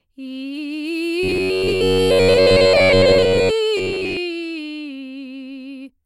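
Music with robotic sound from repeated short buffers at 1.23–3.51 s and 3.77–4.17 s. A rigid 93.8 Hz buzz replaces most of the audio, likely from repeating a roughly 10.7 ms buffer. The spectrogram shows evenly spaced harmonic stripes, and the waveform shows identical repeating cycles.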